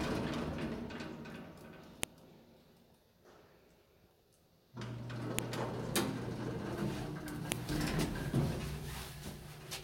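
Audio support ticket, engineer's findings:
File header played as audio: WAV segments joined or streamed with headers left in, so the header bytes are decoded as samples. Heard as sharp, loud clicks at 2.03 s, 5.39 s and 7.52 s, one per segment boundary, independent of the underlying sound.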